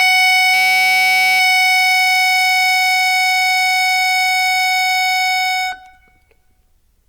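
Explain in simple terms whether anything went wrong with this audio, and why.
From 0.54 to 1.40 s the music turns into a steady buzz at about 188 Hz: a system hang loop, where a frozen computer replays one 5.33 ms slice, which fits a 256-sample buffer.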